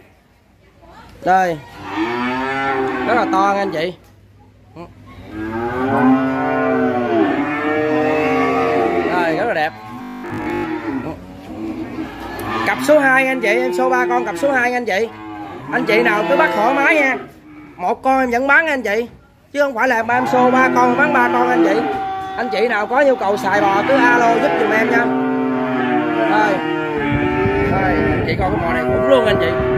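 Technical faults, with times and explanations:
10.02–10.66 s: robotic sound from repeated short buffers. The sound becomes a rigid, metallic buzz locked at 50 Hz, likely because a roughly 20 ms stretch is replayed while most new audio is skipped. Unlike a gap, nothing goes silent, and the repeats fuse into one steady pitch rather than audible chunks.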